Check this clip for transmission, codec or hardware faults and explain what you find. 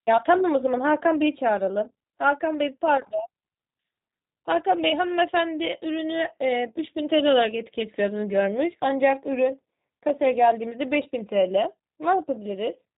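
There's one codec fault, running through the whole clip. Throughout, the speech carries G.729 codec damage: the codec rebuilds each 10 ms frame from a vocal-tract filter, pitch predictor and a few pulses, a sound that fits 8 kbit/s. Nothing survives above 3.8 kHz, leaving the speech muffled, slightly rough and synthetic.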